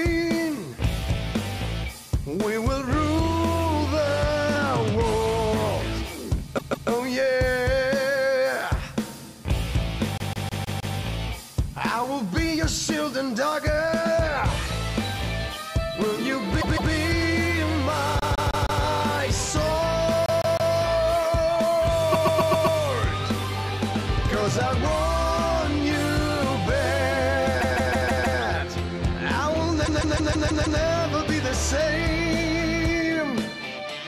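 Repeated frames make the audio stutter at 6.57, 10.18, 16.60, 18.20, 20.26, 22.11, 27.60 and 29.85 s, where a block of about 0.16 s (0.13 s at 22.11 s) plays three to seven times. Waveform and spectrogram show identical copies side by side.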